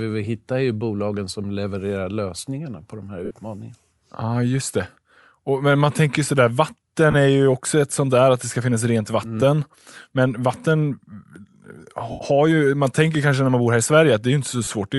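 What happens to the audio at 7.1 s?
A short dropout of lost LE Audio frames runs from 7.11 to 7.15 s, just before "är ju också ett". About 30 ms of audio is missing, which fits four 7.5 ms frames. The decoder covers the gap by reusing the last good spectrum with randomised signs, so the speech is replaced by a brief noisy, smeared texture instead of a clean cut.

The same moment carries the breathy, grainy edge heard throughout the clip. It is likely Bluetooth LC3 compression at about 48 kbps, where the codec zeroes parts of the upper spectrum and fills them with noise. That texture is plainly audible around the gap.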